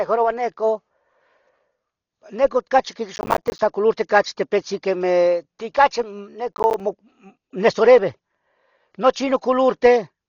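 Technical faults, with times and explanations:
Throughout: Dolby Digital compression. The speech was likely squeezed through an AC-3 style encoder at a very low rate, which fits a bitrate around 32 kbps. To save bits the encoder cut the band, so nothing is heard above about 6.9 kHz, and it starved many frequency lines of detail that the decoder then filled with noise. The damage is heavy: the speech sounds dull and muffled, with a rough, fluttering haze clinging to voiced sounds.
3.16–3.59 s and 6.52–6.80 s: processor overload crackle. The processor fell behind and repeatedly missed its deadlines for small audio buffers, which points to buffers of around 10 ms. Each missed buffer came out as a hard-edged sliver of silence. Dozens of these gaps in the first burst, after "neco cachi" and before "colurti cachi tepitzen quemeh", and about ten in the second, after "tepitzen quemeh ti cachi", blur into a gritty, tearing crackle that stops once the load eases.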